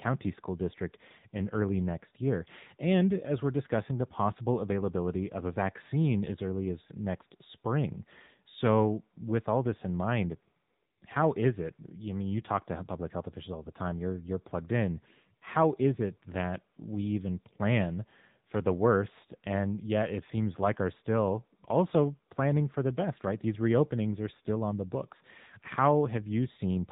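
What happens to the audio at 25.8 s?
The speech passed through the AMR narrowband mobile codec for the whole clip, including 25.8 s. Nothing above 4 kHz survives, and its plainly buzzy, synthetic quality points to roughly 8 kbps.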